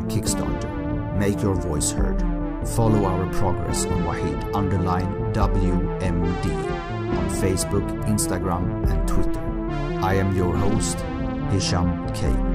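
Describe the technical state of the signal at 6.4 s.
A Bluetooth SBC bit pool drop is underway at 6.4 s, within a stretch running from 3.96 to 7.28 s. The encoder cut its bit budget, which fits a fall from a bit pool of 31 to about 13, near 94 kbps. The highest sub-bands are starved and the rest coarsely quantised, so the treble turns dull and a gritty noise sits over the sound until the rate recovers.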